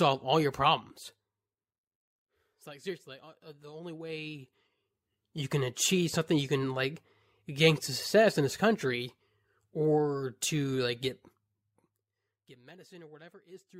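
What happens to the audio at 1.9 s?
At 1.9 s you're right at the tail of some zipper noise running from 0.60 to 1.96 s: the level drops about 20 dB in unsmoothed 1 dB steps, around ten a second, so you hear a ticking zip under the speech.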